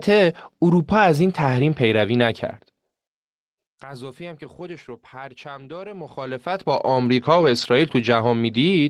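At 1.03 s and again at 2.19 s there's a brief roughness, each a lost packet rebuilt from error correction. A 20 ms stretch went missing, but the next packet carried a low-bitrate backup copy, so the decoder played that instead of leaving a hole. No dropout, just a short grainy, slightly noisier patch in the speech where the coarser copy sits.

From 5.94 s to 7.06 s you get zipper noise. The level moves by around 20 dB, but in hard 2 dB jumps, about ten a second, with no smoothing between them. Each jump leaves a tiny click, so a fine ticking rides on the speech for the whole move.

Between 7.25 s and 7.63 s the error-correction rebuilding comes back harder. It sounds like several separate losses adding up to about 200 ms of patched audio, which points to roughly ten 20 ms packets. Across that stretch the speech turns intermittently rough and hissy.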